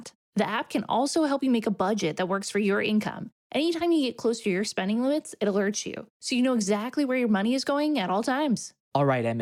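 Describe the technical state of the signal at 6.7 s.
At 6.7 s the signal sits inside a run of repeated timing corrections spanning 0.17 to 8.79 s. The receiver keeps inserting short repeated slices to stay aligned, playing at about 98% speed and adding roughly 150 ms overall, each edit small.

The underlying cause is clock drift between sender and receiver: the sender's clock runs about 2% slow, so the jitter buffer keeps draining. The receiver must stretch the stream with those repeats, which land unevenly through the audio.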